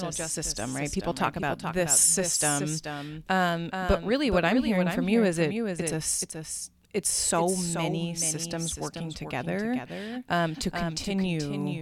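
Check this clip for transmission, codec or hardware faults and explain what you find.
One fault runs through the whole clip: a doubled audio track. The signal was likely picked up a second time through a slower path, so a full-band copy about 5 dB quieter trails the speech by around 0.4 s, giving a dry, undecayed echo of every syllable.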